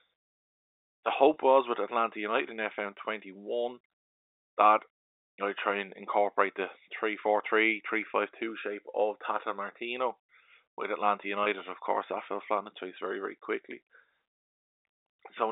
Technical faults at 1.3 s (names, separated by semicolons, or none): packet loss with pitch repetition